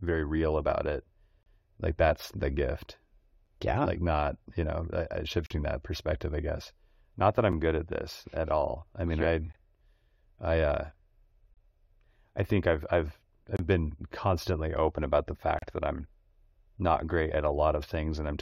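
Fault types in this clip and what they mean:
Gap between stream segments: the 2-second segments' time stamps don't meet, so silence of 5.6 to 40.1 ms fills each join, every 2 s. The waveform drops abruptly to a flat line; the spectrogram shows thin, hard-edged blank vertical strips across all frequencies.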